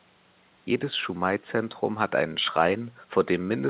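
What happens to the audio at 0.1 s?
Nothing goes wrong at 0.1 s: the speech is intact there, with only the faint room noise well below it and the band limit of the call path, which has nothing above 4 kHz.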